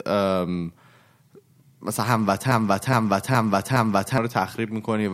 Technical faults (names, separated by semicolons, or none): broken-record loop